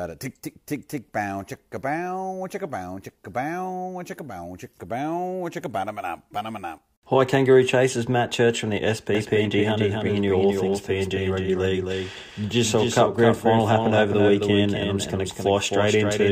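At about 9.15 s a doubled audio track kicks in and stays through to the end. A second copy of the speech sits roughly a third of a second behind the original, around 5 dB quieter, full-band and bone dry, with no room tail. It switches on abruptly, so everything after that point gets a flat, stuttering echo. It's likely a second, slower capture path mixed in alongside the main one.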